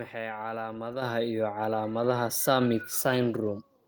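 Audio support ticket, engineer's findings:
Level jumps, speech and background together: sudden step up at 1.02 s, about 7 dB, then another at 2.04 s, about 4 dB. Abrupt, not a gradual ramp. Component: microphone volume stepped up by call-side input gain control. Software judged mic too quiet and raised device input volume in a single step each time, lifting everything the mic picks up at once.

Speech turns rougher and more watery from 2.72 s to 3.81 s, coarsest for roughly the last second. Component: Opus encoder on the WebRTC call path, call bitrate drop. Bandwidth estimate fell, encoder forced to spend fewer bits, so coding noise rises. Sound fits a drop from around 32 kbps to around 18 kbps.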